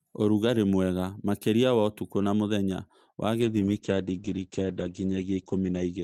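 Right after "ũtukũ na mũthenya wa", at 3.43 s, there's a call bitrate drop that lasts to the end of the clip. The connection's bandwidth estimate fell, so the encoder went from about 48 kbps to 10 kbps and sat at the bottom for roughly 1.89 s. At that rate it trims the top end from 20 kHz down to 8 kHz, so the speech goes muffled and rough and watery, and it never recovers before the end.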